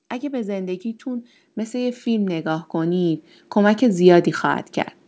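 From 0.21 s to 4.31 s, automatic gain rising occurs as the gain control judges the input too quiet and keeps lifting its level, by about 15 dB overall. The voice and background swell together steadily through the speech, while the call path's 8 kHz ceiling stays unchanged throughout.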